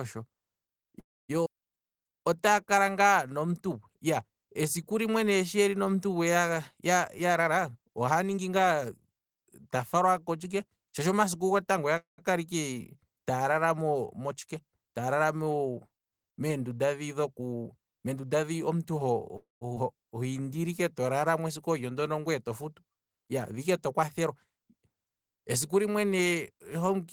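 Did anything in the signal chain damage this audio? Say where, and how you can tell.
Yes. The damage comes from the network and the receiver's jitter buffer.

There are three call audio freezes: 0.99 to 1.31 s, 11.97 to 12.20 s just after "gotango oya", and 19.37 to 19.63 s. Each time, the last sound is stretched into a fading buzz and then drops to silence. Speech resumes where it stopped, with nothing lost. Late packets are the likely cause.

There are two skip-ahead events, at 1.45 to 1.48 s and 19.75 to 19.78 s. Playback jumps forward with almost no gap. Roughly 150 ms and then roughly 100 ms of speech are gone. The two sides are butted together, so the audio was discarded rather than delayed.

A jitter buffer slow-down runs from 1.82 to 3.51 s, ending just before "yo esiku". Another runs from 20.18 to 21.13 s. Speech plays at 91% and 89% speed with unchanged pitch. Repeated pitch periods add 151 ms and 108 ms to refill the buffer.

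A jitter buffer speed-up runs from 7.04 to 9.08 s at 114% speed. A second follows "meendunda dhi", from 17.39 to 19.00 s at 113%. Pitch holds, but speech sounds hurried. Trimmed pitch periods remove about 300 ms and 200 ms of excess delay.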